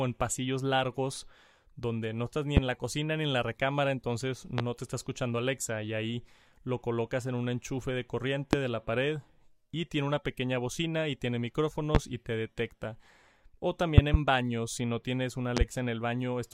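Speech with a recurring loud pop: sharp thumps well above the voice at 2.57, 4.58 (right after "en la recámara entonces"), 8.53 and 11.95 s, then double pops at 13.98–14.17 and 15.57–15.64 s, with the speech carrying on underneath. Likely voltage spikes from a plug, switch or static.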